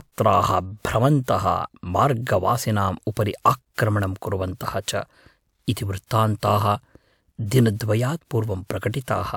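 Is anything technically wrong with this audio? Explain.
No, there is nothing technically wrong to point to in this speech recording. At no point in the clip does a technical fault show itself.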